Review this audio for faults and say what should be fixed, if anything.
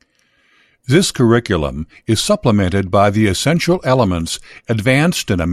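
Nothing stood out on listening to this speech, so there is nothing here that needs fixing.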